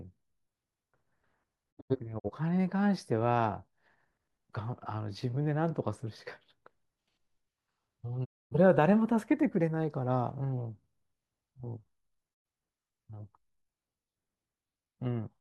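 Speech with three digital broadcast dropouts, where the receiver mutes after losing signal or rejecting corrupted frames, then resumes. From 1.71 to 2.30 s, scattered short holes total about 170 ms, the longest about 85 ms. A single gap runs from 8.24 to 8.56 s, and another from 12.33 to 12.46 s. Each cut fades out and back in over about 20 ms, the hole lengths fit whole lost frames, and the missing audio is gone.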